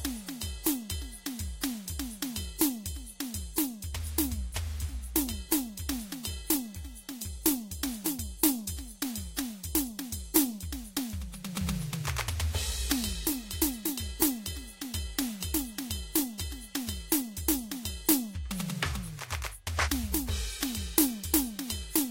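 Nothing goes wrong anywhere in this music, so there's no technical fault to point to at any moment.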